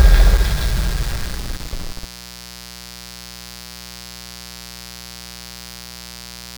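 An everyday sound recording with mains buzz throughout: switching spikes from a dimmer, rectifier or unshielded line, twice per 60 Hz cycle, add a steady, raspy buzz about 20 dB under the sound.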